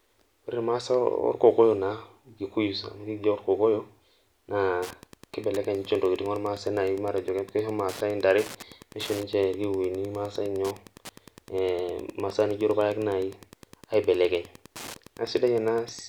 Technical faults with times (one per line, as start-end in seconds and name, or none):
4.81-16.09 Wi-Fi interference